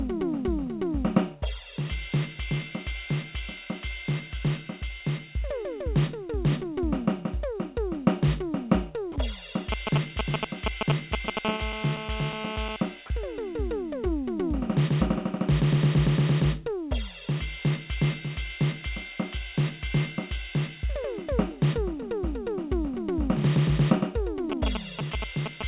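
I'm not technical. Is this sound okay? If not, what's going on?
No. Three problems come from a mobile phone and the call system.

Sound dropped by the voice detector: the sending side's voice detector likely mistook the music for background and briefly stopped sending. For 40 milliseconds at about 9.12 s, the music cuts out and a soft, steady filler noise takes its place. The music then returns. It's a tiny gap, more a flicker than a pause.

GSM signalling bursts: an older 2G mobile phone nearby was briefly talking to its network. The audio circuitry picked up those radio pulses as sound. From 9.72 to 11.39 s, a galloping dit-dit-dit of short buzzes rides over the music, somewhat louder than the music itself. It returns from 24.52 s to the very end, roughly as loud as the music this time.

GSM phone buzz: right after the first bursts, the same phone settled into steady transmitting, as it does during a call. 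The circuitry again turned those pulses into sound. From 11.45 to 12.76 s there's a continuous harsh, raspy buzz at 217 Hz layered under the music, quieter than the music and unrelated to it.

Throughout, the music also has a phone-call quality, with nothing above 4 kHz, because it passed through a call connection.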